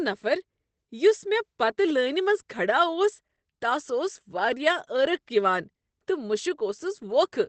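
Opus voice compression runs through the whole speech clip, audibly muffling and roughening it. Nothing is heard above 8.5 kHz, consistent with the SILK coder in wideband mode, and the coarse, slightly robotic excitation points to a low bitrate of around 12 kbps.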